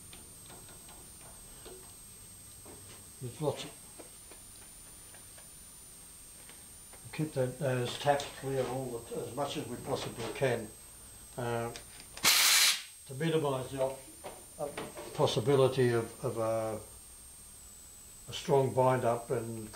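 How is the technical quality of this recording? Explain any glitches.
The recording has one technical fault, present for its whole length. A switching supply whistle runs from start to finish. The supply's regulator is oscillating at an audible rate, leaking a high, thin whistle that wanders between roughly 8.1 and 9.1 kHz as the load shifts. It sits about 15 dB below the main audio.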